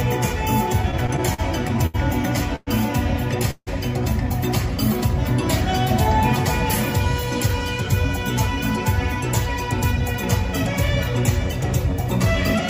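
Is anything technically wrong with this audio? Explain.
Yes. From 0.73 to 1.96 s the sound drags and stutters through nine brief holds, the longest 75 ms: repeated stalls (stutter), where late packets kept emptying the jitter buffer, so the last sound was stretched.

At 2.56 to 2.69 s and again at 3.51 to 3.69 s the sound freezes into a fading buzz for 109 ms and 160 ms, the second sinking to 50 ms of silence, before resuming where it stopped. These are call audio freezes, likely packets held up in transit until the jitter buffer ran dry.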